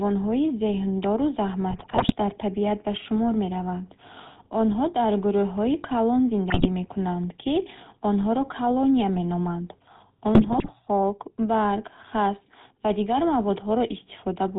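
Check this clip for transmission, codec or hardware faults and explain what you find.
Yes, two faults are present: a codec coloration across the whole clip and three short bursts of transmission damage.

Throughout the speech there is a buzzy, gravelly roughness with nothing above 4 kHz. This is the GSM full-rate codec at 13 kbps. It rebuilds the voice from a vocal-tract model driven by a thinned-out pulse excitation, which leaves the speech plainly degraded.

Three times the voice breaks into squawks, pops and gargling: 1.70 to 2.15 s, just before "дар табиат ба шумор"; 6.50 to 6.67 s, between "дар гурӯҳҳои калон" and "мекунанд ки онҳоро колония"; and 10.34 to 10.69 s. These are GSM bit errors, a rate of around 3 percent reaching the decoder. Corrupted filter, pitch and gain values distort the spectrum and level frame by frame.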